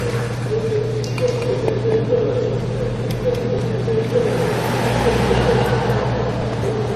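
A doubled audio track runs from start to end: a second full-band copy trails the original by about 200 ms at roughly 5 dB quieter, with no decay or room colour. The likely cause is the same sound being captured again through a slower path.

Transcoding between lossy codecs is also present throughout. The audio likely passed through HE-AAC at 32 kbit/s and then AAC-LC at 48 kbit/s. Nothing survives above 13.8 kHz, and the smeared, warbly artefacts of both encoders are heard stacked together.

A dropped buffer (overrun) occurs at 3.59 s and again at 6.42 s. Each is a place where the sound jumps ahead with no gap, skipping only a few milliseconds. That points to a short buffer likely overwritten before the program collected its samples.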